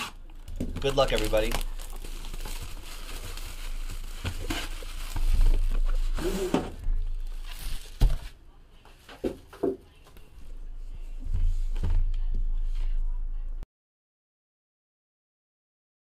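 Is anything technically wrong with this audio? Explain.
Yes. From 13.63 s to the end, the audio drops out to silence: the input was likely lost, through a disconnected device, failed link or mute, while recording continued writing silence. The sound cuts off mid-flow into total silence, with no room tone, for the last 2.5 seconds.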